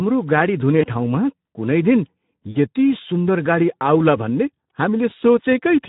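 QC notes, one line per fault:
Throughout: Speex codec at a low-to-middle setting, plainly audible; too few bits for the excitation leave the speech hoarse and noisy, which fits roughly 11 kbps.
0.81–0.86 s, 2.51–2.58 s, 5.09–5.13 s: VoIP packet loss concealed by the speech codec; the decoder extrapolates its last pitch and filter, so speech smears into a fading buzzy tone or coloured noise lasting about 20, 40 and 20 ms.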